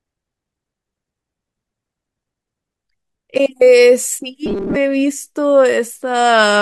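From 4.46 to 4.76 s the speech turns into a rigid, metallic buzz fixed at 200 Hz, still loosely tracking the words: robotic sound from repeated short buffers. This likely comes from starved playback looping a 5 ms chunk, replacing most of the real audio in that span.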